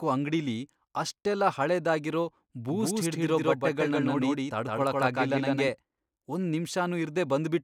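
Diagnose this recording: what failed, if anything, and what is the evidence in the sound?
A doubled audio track runs from 2.70 to 5.68 s, right after "ಅಂಗ್ಡಿಲಿ ಅಷ್ಟೆಲ್ಲ ಹಳೇದಾಗಿರೋ": an equally loud, full-band copy trails by roughly 150 ms, most likely from a second, slower capture path. The spectrogram shows every onset repeated with identical spectra and no decay, switching on and off abruptly.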